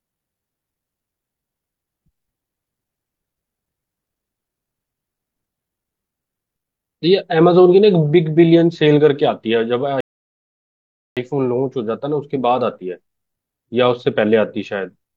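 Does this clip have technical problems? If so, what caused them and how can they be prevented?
Yes. A rebuffering stall silences the speech from 10.01 to 11.17 s. Playback outran the download, paused, then resumed exactly where it stopped, adding 1.16 s. A larger startup buffer or adaptive bitrate would prevent this.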